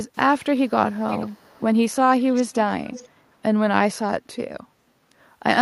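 Faint, half-second-delayed copies of the speech trail it at 0.14–0.35, 0.95–1.77, 2.32–2.73 and 2.91–3.09 s, strongest in the second stretch, likely echo leak from a loudspeaker-side canceller.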